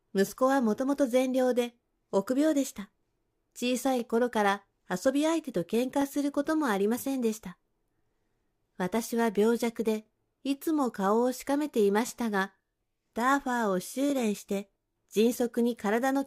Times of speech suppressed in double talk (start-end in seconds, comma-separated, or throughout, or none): none